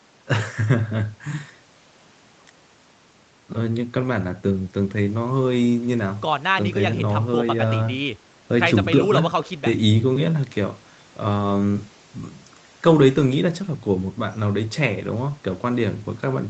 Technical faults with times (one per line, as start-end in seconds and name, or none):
none